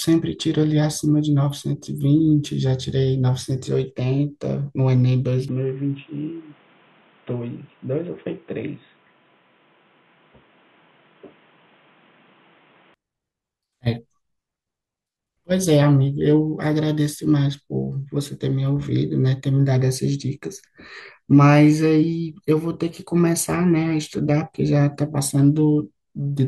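At 5.49 s the speech abruptly turns dull and boxy, with no gap at the transition, and stays that way until 12.94 s, when the full brightness returns. This is most likely an input switched to a poorer device, one passing nothing above 3.8 kHz and bringing its own faint noise floor, about 35 dB below the speech. On a spectrogram the upper band is empty between those times, while the waveform's loudness barely changes.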